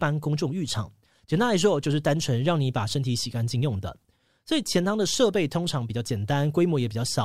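Speech recording with no audible technical faults at any point.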